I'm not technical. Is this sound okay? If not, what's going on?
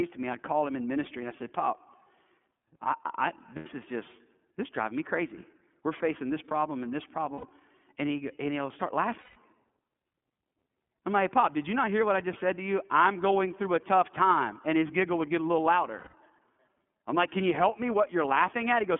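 No. The whole recording has passed through the iLBC codec, a phone-call codec built for internet calls. It squeezes the sound into small 30 ms chunks and keeps only the range from about 150 Hz to 3.4 kHz. That is why the speech sounds narrow, like an old phone line. The damage is plainly audible. The voice comes across a little rough and slightly synthetic, as if partly rebuilt by a machine.

There are also four spots with lost iLBC frames. Some chunks of the call never arrived. The decoder filled each gap by repeating the last bit of voice with some noise mixed in. The gaps sound like a brief, buzzy, held vowel. The first runs from 3.56 to 3.67 s, between "I I" and "is just this driving". The second runs from 7.35 to 7.47 s. Both of those last about 90 ms. The longer ones last about 150 ms. One runs from 9.20 to 9.37 s, right after "he and he'll start". The other runs from 15.99 to 16.15 s, right after "would get a little". 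Each chunk stands on its own, so the voice sounds right again almost at once after every gap.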